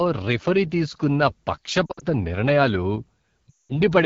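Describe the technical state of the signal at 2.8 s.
At 2.8 s, as across the whole recording, the speech is carried through the AMR wideband (HD Voice) codec at a low rate, which fits the 8.85 kbit/s mode. The coder rebuilds the voice below 6.4 kHz from a sparse pulse excitation driving a vocal tract model, then fills the band up to 7 kHz with shaped noise. With so few bits, the damage is plainly audible: the speech sounds rough and raspy.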